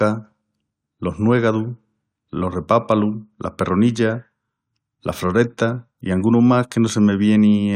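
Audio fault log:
3.89 s, overlap between stream segments: adjacent 2-second segments' timestamps overlapped, so the player discarded 15 ms of speech; the waveform jumps, heard as a tiny skip.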